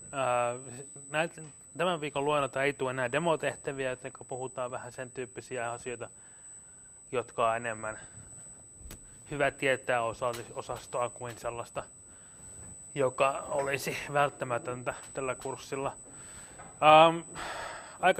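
A steady high whine at 8 kHz runs under the sound for the whole clip. It is USB whine. The bus's 125-microsecond microframes draw current in pulses, which leak in through power or ground. It sits roughly 20 dB below the signal.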